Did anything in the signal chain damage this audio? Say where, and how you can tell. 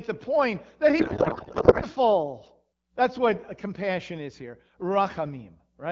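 Yes. At the codec stage, from 0.99 to 1.86 s the speech gives way to garbled noise and warble that barely tracks it: a codec payload misread. The octet-aligned AMR packing looks like it's being parsed as bandwidth-efficient, so every frame's fields land in the wrong places. The AMR-WB coding around it, which points to 12.65 kbit/s, shows only light damage.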